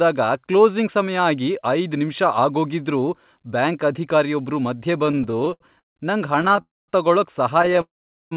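Repeated stalls (stutter) begin at 5.06 s, just after "ಆಗೋಗಿದ್ರೂ ಬ್ಯಾಂಕ್ ಅಧಿಕಾರಿಯೊಬ್ರು ಮಧ್ಯೆ", and run to 5.98 s. Late packets repeatedly drained the jitter buffer, so the receiver stretched the last sound across 14 gaps of up to 158 ms. The speech drags and hiccups, but nothing is lost.

Shorter stalls follow from 6.42 to 6.59 s, five gaps of up to 12 ms, heard as a brief rapid flutter.

A call audio freeze comes next, from 6.61 to 6.90 s. It was likely caused by delayed packets leaving the buffer empty. The held sound fades into about 220 ms of silence, then the speech resumes where it stopped.

Stalls return from 7.62 to 7.79 s as five more tiny stutters.

A second freeze runs from 7.81 to 8.33 s. The sound dies away into roughly 440 ms of silence before continuing.

Throughout, the narrow call bandwidth, with nothing above 4 kHz, fits a G.711 connection.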